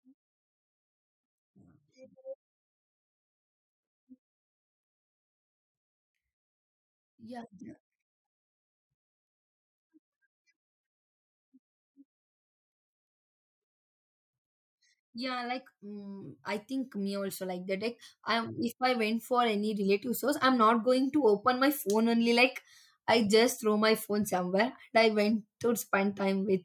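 From 15.12 to 21.73 s, automatic gain rising lifts level about 13 dB before "phone only"; background noise swells with speech, unlike a talker moving closer.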